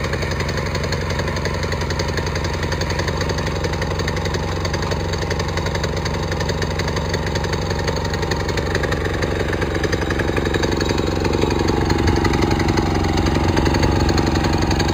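Imaging from linear upsampling runs throughout. The top end is dulled, and a faint mirrored copy of the spectrum, roughly 20 dB down, sits between about 5.5 and 11 kHz, adding a light metallic shimmer. This fits straight-line interpolation from 11 kHz to 44.1 kHz.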